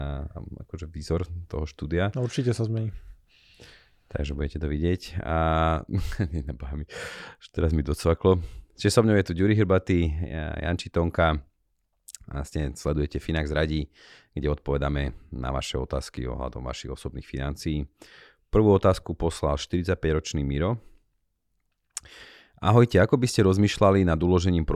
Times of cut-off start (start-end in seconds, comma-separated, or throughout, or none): none